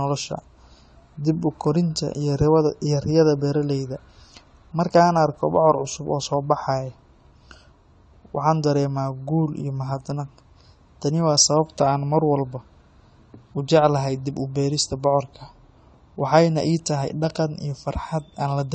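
From the first second to the end, the whole clip sounds dull, with nothing at all above about 9.7 kHz, and the sibilants and held vowels have a fizzy, warbling edge that's plainly audible. That's most likely AAC compression, AAC-LC pushed hard enough that the encoder lowered its cut-off and starved the remaining bands, which fits a low bitrate in the region of 32 kbps. The smearing comes from coarse quantisation leaving gaps the ear picks up as swirl.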